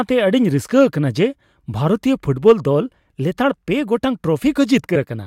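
Compressed frames skipped at 4.95 s, near the end of the speech: the decoder plays nothing for a couple of frames, missing or rejected as damaged, so the audio jumps ahead by about 40 ms.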